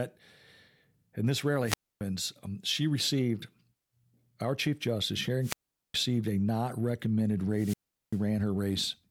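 Wireless microphone squelch dropouts occur at 1.64 to 2.01 s, between "and this" and "um she received", at 5.41 to 5.94 s, just before "a not recommended", and at 7.53 to 8.20 s, after "a not recommended". Each time the radio link from the microphone weakens, hiss swells, and the receiver's squelch cuts the output to near silence for 0.27 s, 0.41 s and 0.39 s respectively before the speech comes back.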